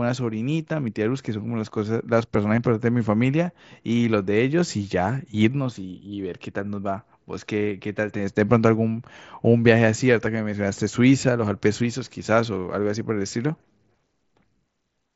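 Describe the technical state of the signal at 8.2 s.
At 8.18 s there is a brief concealed Bluetooth headset packet loss, about 15 ms, which fits two consecutive lost packets. The receiver filled the gap by repeating the best-matching recent stretch of waveform, leaving a tiny buzzy blip against the light grain of the mSBC wideband audio.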